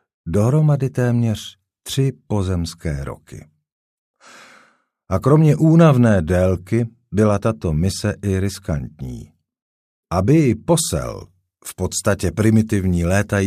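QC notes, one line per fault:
10.78–13.47 s, pre-emphasis left on: treble sits about 8 dB hot at 10 kHz, likely a CD 50/15 µs boost never undone, so the speech turns thin and sibilant.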